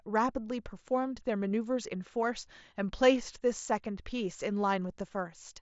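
No technical faults can be heard in the speech. It comes through a Bluetooth mSBC headset codec, with nothing above about 7.7 kHz and only a light codec grain.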